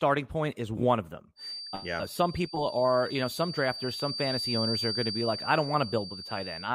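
From 1.35 s, just after "is one of them", a thin 4.6 kHz feedback whistle sits roughly 10 dB under the speech to the end, likely a speaker-to-mic loop hovering at the edge of howl.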